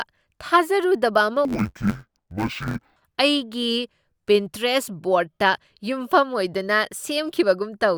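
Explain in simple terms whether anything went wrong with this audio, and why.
From 1.45 to 2.97 s the speech turns dull and robotic, with a buzz at about 92 Hz. That's interleaved audio read as planar: each 10.88 ms chunk got its left and right samples split wrongly and slowed to half speed, so it buzzes at the chunk rate.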